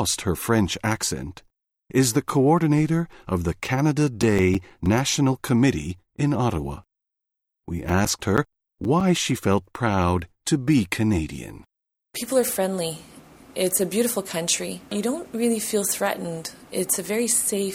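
From 3.75 to 5.34 s and again from 7.73 to 9.32 s, CD scratch ticks recur about seven times a second: once per disc revolution, a scratch exceeds error correction, leaving brief interpolated or muted gaps, the second run's clicks longer.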